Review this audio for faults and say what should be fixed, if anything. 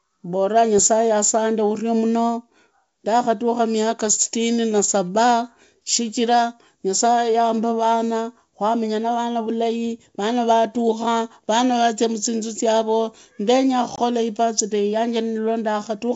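Packet loss on an ADPCM call at 13.96–14.00 s: a 20 ms silent gap, about one packet, in the G.722 stream desynchronises the decoder's predictor and step size, so speech resumes slightly distorted. Packet loss concealment that resynchronises the ADPCM state, backed by a jitter buffer, would prevent this.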